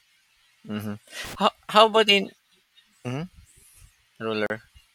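At 1.25 s a loose connector crackle breaks into the speech and lasts until 1.35 s. A worn or dirty contact is making and breaking as it shifts. The signal gets chopped into a brief, irregular burst of scratchy crackle about a tenth of a second long.

At 4.46 s there is a gap at a join of encoded pieces. Two separately encoded sections were joined untrimmed, leaving encoder delay and padding between them. The speech drops out for about 36 ms, with smeared edges, then resumes where it stopped.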